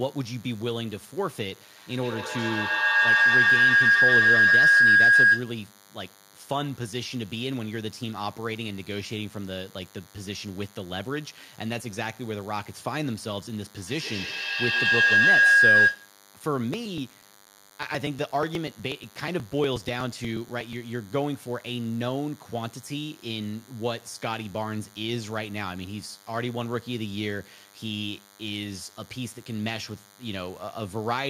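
Under the speech, from start to finish, runs a DECT cordless phone buzz. A nearby handset or base station transmits a radio burst every 10 ms, and the audio circuitry rectifies it into a thin, steady 100 Hz buzz rich in harmonics, sitting roughly 25 dB below the speech. Unlike mains hum at 50 or 60 Hz, its fundamental is exactly 100 Hz and its tone is rasping rather than smooth. It never changes level.

From 1.76 to 5.64 s, and again from 13.75 to 16.19 s, a feedback howl builds. Two devices in the same room are joined on one call, and the microphone-to-loudspeaker loop gains level on each pass, so the sound narrows to a tone around 1.5 kHz. That tone pulses roughly every tenth of a second and peaks about 12 dB above the speech. An echo fades away on each pass. This one grows until the loop is broken.

From 16.74 to 20.73 s, periodic USB or driver dropouts appear. Every 0.121 s, something blocks the audio driver or USB bus, and roughly 4 ms of audio is skipped rather than replaced with silence. 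That produces around thirty small ticks at an even, mechanical spacing. Random network glitches would be irregular, and these are not. The ticks are heard only while speech is present and vanish in the pauses.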